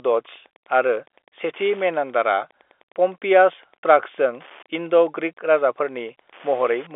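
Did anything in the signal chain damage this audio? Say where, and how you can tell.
Yes, Wi-Fi interference got into the analogue wiring and runs under the speech for the whole clip. A nearby Wi-Fi radio's beacon is being rectified by the audio circuit, producing a steady tick every 102.4 ms, about ten times a second, at roughly 30 dB below the speech. On a spectrogram this shows as evenly spaced thin vertical lines, which the telephone band cuts off above about 3.7 kHz. On the waveform it appears as small regular spikes, even in pauses.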